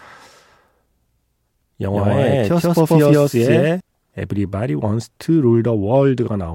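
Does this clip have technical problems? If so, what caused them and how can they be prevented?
Yes. From 1.93 to 3.81 s there is a doubled audio track, likely caused by the same speech reaching the mix twice, once directly and once through a slower path or a misaligned edit. A second full-band copy trails the original by roughly 150 ms at about the same level. It carries no decay or room colouring and switches on and off abruptly. To prevent it, route each source into the mix only once and check edits for overlapping duplicate copies.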